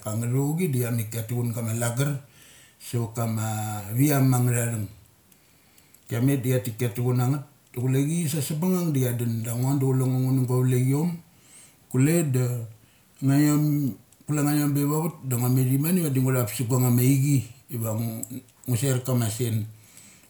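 No technical faults occur at any point in the recording, so there are none to describe in time order.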